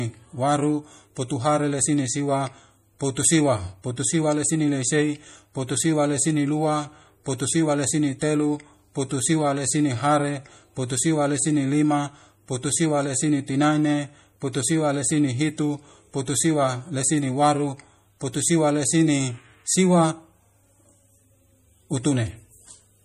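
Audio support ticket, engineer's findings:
MP3 compression, whole clip; codec damage plainly audible on the speech. Watery, swirling texture, metallic chirps on s sounds, smeared consonant attacks. Hard treble ceiling, nothing above 15 kHz. Likely an MP3 encode short of bits, fitting a bitrate around 40 kbps: weak frequency lines dropped, switching on and off frame to frame. Distinct from a plain low-pass filter or noise gate because the damage keeps shifting within the band instead of staying fixed.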